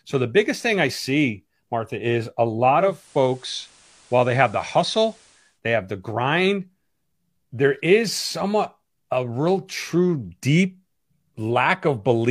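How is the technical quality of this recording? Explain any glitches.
The recording has one glitch, a stretch where the radio falls back from its digital signal.

From 2.73 s to 5.61 s, between "is a" and "they have the grind", there is a digital radio blend to analogue: the receiver lost its digital stream and cross-faded over about 0.38 s to the station's FM broadcast, then returned. The speech keeps its level, and a steady hiss appears roughly 30 dB below the speech. Unlike a codec dropping to a lower bandwidth, this brings in hiss and fades smoothly in and out.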